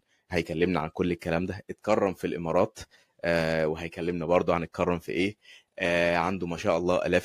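No technical faults can be heard anywhere in this speech recording. There is no moment in it that calls for a timestamp or an explanation.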